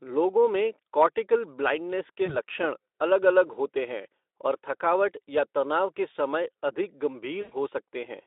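Speech over a Speex link, with VoIP packet loss concealed by the speech codec. At 2.25 s, after "में कॉर्टिकल ब्लाइंडनेस के", a brief gap of about 20 ms is papered over with a buzzy or noise-like fill. At 7.41 s, after "तनाव के समय अधिक", a longer loss of about 100 ms stretches into a fading tone or coloured noise.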